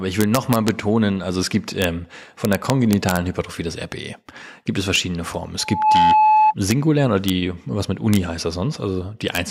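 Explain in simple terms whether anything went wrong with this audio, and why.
Two things went wrong in this speech clip.

The first is integer overflow. When the sound got too loud, the numbers storing it ran past their largest value and wrapped around to the opposite extreme. They should have been capped instead. Each time, you hear a harsh crack, sharper than ordinary clipping. It happens at 0.21 to 0.68 s, just before "also es gibt", and again at 1.82 to 1.84 s, right after it. It also happens at 2.45 to 3.17 s, 4.96 s, 6.71 s, 7.29 s (just before "was mit"), 8.14 to 8.16 s, and 9.35 to 9.37 s.

The second is loudspeaker feedback squeal. A microphone picked up the loudspeaker it was feeding, so the sound kept looping back and growing. One pitch, at 863 Hz, swelled into a whistling tone. It starts at 5.59 s and takes about a third of a second to build. It then rings clearly above the speech until 6.54 s.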